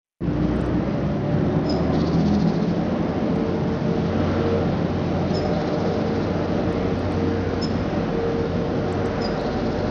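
From start to finish the everyday sound carries plainly audible damage, likely from Bluetooth SBC compression at a starved bit pool, which fits roughly 80 kbps. Its coarse sub-bands let the treble flicker and drop, with gritty noise and aliasing, rather than the swirling, smeared artefacts of perceptual codecs.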